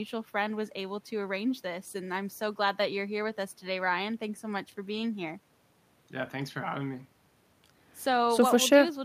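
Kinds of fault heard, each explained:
No technical faults can be heard in this speech recording. Nothing breaks into the audio to mark a problem at any point.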